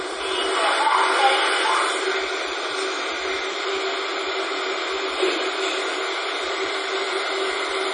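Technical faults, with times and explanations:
Throughout, MP3 compression. Nothing is heard above about 10.1 kHz, so the top end is cut off flat. The damage is heavy. Faint parts of the sound flicker in and out, giving a watery, swirling texture. Bright, noisy sounds turn metallic and chirpy, and sharp onsets smear. The likely cause is an MP3 encoder starved of bits, which fits a bitrate around 32 kbps. It drops the treble and zeroes weak detail frame by frame.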